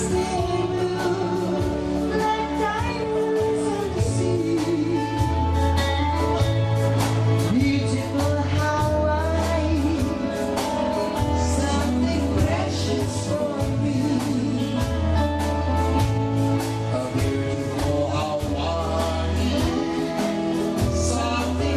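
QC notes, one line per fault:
No faults heard.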